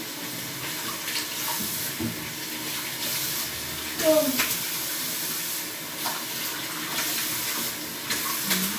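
No technical faults can be heard anywhere in this sound.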